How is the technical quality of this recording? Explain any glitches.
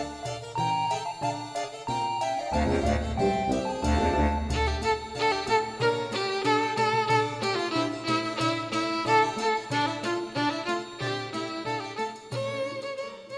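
No glitches can be heard anywhere in this recording. At no point does anything interrupt or disturb the sound, so there is nothing to explain.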